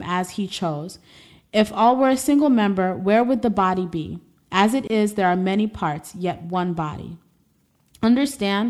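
Speech, with one gap at a join of encoded pieces. At 4.87 to 4.90 s the sound drops out for about 25 ms. The edges are smeared by the codec. Separately encoded segments were joined untrimmed, leaving encoder delay and end padding in.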